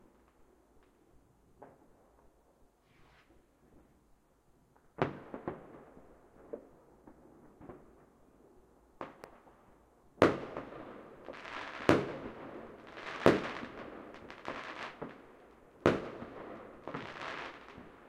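At 9.24 to 9.26 s a single loud pop sits over the sounds, roughly 10 dB above them, likely a switching or static voltage spike. It appears as a tall waveform spike and a thin full-band spectrogram stripe.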